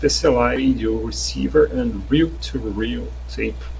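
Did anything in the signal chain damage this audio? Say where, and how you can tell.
Yes. There is a skip ahead at 0.56 to 0.58 s, at the network and jitter-buffer stage. The speech jumps forward with no filler or silence at the join, and around 0.4 s of material is simply gone. Audio that had been delayed was discarded, either in transit or when the buffer overflowed while later packets were already queued. The two sides of the gap are spliced almost directly, so the audio lurches forward instead of pausing.

A jitter buffer speed-up follows from 0.66 to 2.39 s, in the same buffer stage. The speech runs at about 108% of its normal rate with the pitch unchanged, which gives it a slightly hurried, compressed delivery. The buffer was holding more audio than its target, so the receiver trimmed short pitch-period-length slices again and again to bring the delay down. In total it removed something like 150 ms. 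Underneath both faults, the G.722 call codec band-limits everything to 8 kHz.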